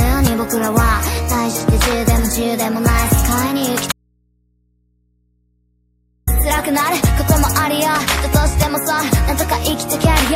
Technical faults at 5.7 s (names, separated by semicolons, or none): audio dropout to a faint residue